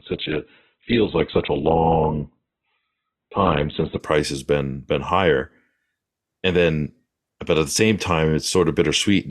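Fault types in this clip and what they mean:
Adaptive stream starting at a low bitrate: The player begins on a cheap version of the stream, then switches up. For the first 4.0 s the speech has nothing above 4.2 kHz and heavier codec artefacts. This fits a very low-bitrate Opus stream. Quality then jumps suddenly, without a gap.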